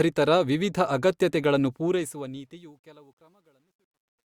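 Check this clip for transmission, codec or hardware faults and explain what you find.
There's one real problem, and it's on the fade-out. From 1.71 s, right after "ವಿವಿಧ ಅಗತ್ಯತೆಗಳನ್ನು", to the end, you get truncation distortion on the fade. The undithered stage, which fits about 11 bits, stair-steps the waveform, so the speech turns gritty. It's worst from 2.75 s to 4.28 s.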